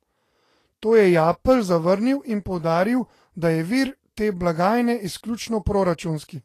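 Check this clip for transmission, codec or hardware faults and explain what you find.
One fault runs through the whole clip: lossy compression damage, most likely from Vorbis compression. It lasts from start to finish. The speech has nothing above 14.2 kHz. The treble sounds hissy and grainy. Consonant onsets are blurred, and steady tones sound rough. A Vorbis-style encoder keeps a smooth outline of the spectrum. It then quantises the detail on top very coarsely. Fine high-frequency structure turns into noise of similar energy. The damage is plainly audible, which points to a low bitrate around 34 kbps.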